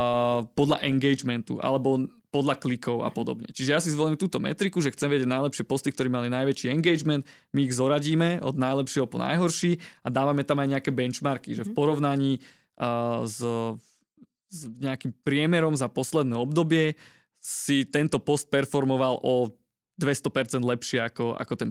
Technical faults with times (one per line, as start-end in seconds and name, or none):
none